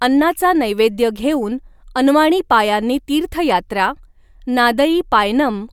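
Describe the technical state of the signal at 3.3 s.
The signal at 3.3 s is intact, with no audible fault in the speech at that point.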